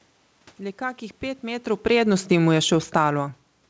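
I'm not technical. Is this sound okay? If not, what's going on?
No. From 1.71 to 3.21 seconds, automatic gain falling sets in: the system decided the input was too loud or too noisy and slowly turned it down. Unlike the talker moving around one and a half seconds, here the room's background noise fades along with the voice.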